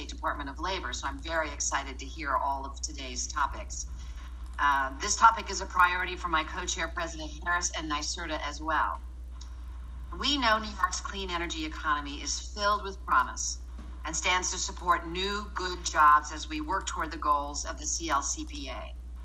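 Right from the start and all the way through, there's a steady tick at 25 Hz, which points to the resampler restarting on every block. The 24 kHz to 48 kHz conversion seems to run on 40 ms chunks with no memory of their neighbours, so each seam gets a small error that's audible wherever there's signal.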